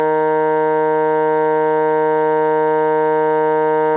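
No technical faults are audible.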